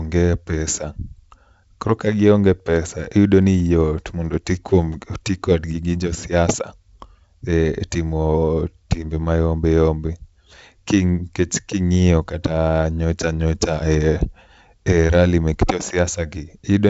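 No technical faults can be heard in this speech recording.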